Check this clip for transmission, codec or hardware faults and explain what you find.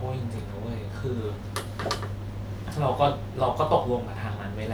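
Nothing in the recording stood out as a problem when I listened to it.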